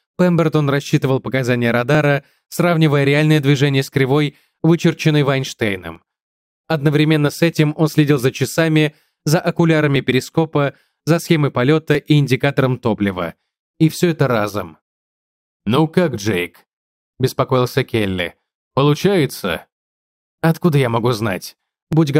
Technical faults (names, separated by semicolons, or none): periodic USB or driver dropouts